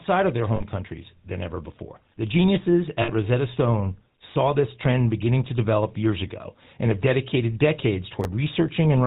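Throughout the speech, the GSM full-rate codec is plainly audible as a buzzy, gravelly roughness, with the character of GSM full rate at 13 kbps. The codec models the vocal tract and drives it with sparse, regularly spaced pulses. On a spectrogram, everything above 4 kHz is empty.

From 0.56 to 0.62 s, and again from 3.02 to 3.11 s, lost GSM frames are replaced by the last good frame's settings. The sound is held as a rough, metallic ring lasting about 40 ms and then about 60 ms. That fits two and then three missing 20 ms frames. On a spectrogram, these spans show frozen, repeated harmonic bands instead of moving formants.

From 8.21 to 8.25 s, chunks are out of order. A short slice, consistent with a 10 ms chunk, plays about three chunks late, after material that should follow it. Nothing is lost, but the reordering makes a brief jumbled moment. The waveform shows three hard joins where the signal jumps discontinuously.

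From 8.76 to 8.79 s, another lost GSM frame, consistent with a single 20 ms frame, produces a brief metallic ring held from the preceding frame. It appears as a short stretch of static, smeared spectrum.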